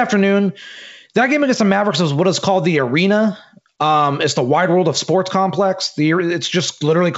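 No technical faults are audible.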